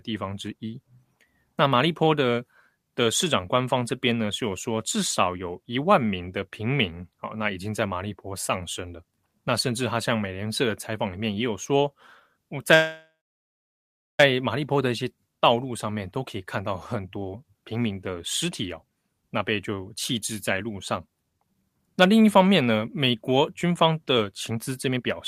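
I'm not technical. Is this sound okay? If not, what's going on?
No. At 12.74 s there is a call audio freeze. The sound stalls, goes mostly quiet for about a second, then resumes at 14.20 s. Nothing is lost, likely because packets arrived late.

From 16.47 s to 25.04 s there is a jitter buffer speed-up. The speech plays about 9% faster at the same pitch, trimming roughly 0.7 s, so it sounds hurried.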